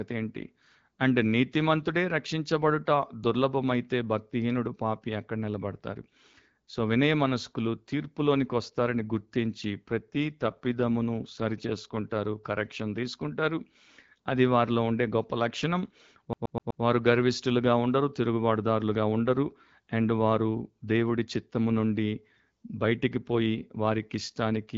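From 9.87 to 12.04 s there is an AMR rate drop. A weak link appears to push the wideband codec below its clear HD Voice rate, and the roughening fits a fall from 12.65 to 8.85 kbit/s, with bits diverted to error protection. Bandwidth and continuity hold, but the speech turns grainier and more synthetic until the rate recovers.

From 16.33 to 16.83 s the playback behaves like a CD stuck on one turn. A scratch keeps throwing the laser back one track at the same point, so a 125 ms slice plays four times. Each jump leaves a brief mute, producing a rapid, even stutter.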